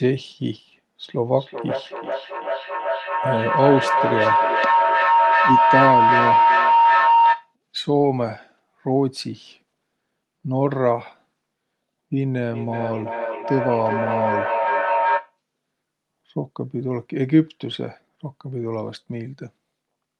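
Feedback howl at 1.02 to 7.55 s and again at 12.52 to 15.38 s: a microphone-to-loudspeaker loop gains on each pass, building a tone around 1 kHz with repeats roughly every 400 ms, peaking at about 4 dB above the speech the first time.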